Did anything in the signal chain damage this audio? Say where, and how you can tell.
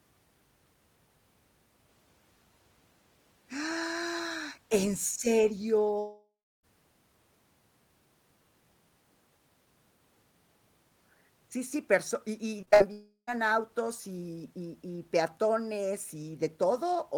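Yes. Long network dropouts at 5.99–6.65 s and 12.92–13.31 s, before "autos y y y". Sound smears into a fading buzz, then silence. Likely a network outage.

Repeated packet loss (robotic sound) at 12.61–12.82 s. Four short holes, the longest 59 ms, are patched with stretched sound. It turns choppy. This is network-stage damage.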